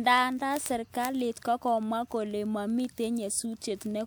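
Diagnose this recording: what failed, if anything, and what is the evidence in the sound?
A steady train of sharp ticks of uneven strength runs under the speech from 0.13 s to 4.06 s, repeating about every 50 ms, around seventy in all. These are word clock ticks at the digital interface: the receiving device runs on its own clock, unlocked from the sender's, with a mismatch of roughly 500 ppm. Each time the two clocks slip past each other, a few samples are misread and a single sample is dropped or repeated, producing one tick.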